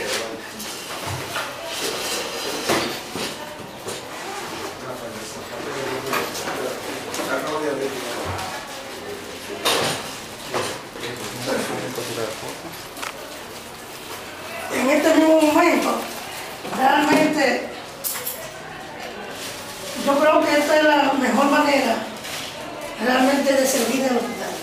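A clock-matching stage likely made a drift correction step, changing playback rate abruptly. From 10.94 to 12.43 s the audio slows by 5.94%, dropping about a semitone (-106 cents) before snapping back. From 23.50 s to the end it speeds up by 5.94%, rising about a semitone (+99.9 cents).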